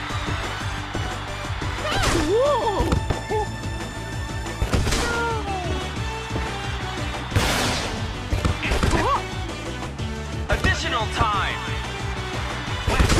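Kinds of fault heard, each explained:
Overlap between stream segments: adjacent segments claim overlapping time, so the player discards a few milliseconds, around 5 to 16 ms, at 1.91, 3.91 and 9.86 s, near 2 s boundaries. The waveform steps abruptly, showing as thin broadband vertical lines on a spectrogram, heard as tiny skips.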